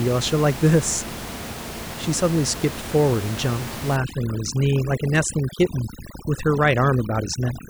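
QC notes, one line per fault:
3.96–7.69 s, overdone noise removal. From 3.96 s to the end, the background drops and breaks up into twinkling specks. A noise reducer set too hard is cutting bands near the room-noise level. Quiet speech detail goes too.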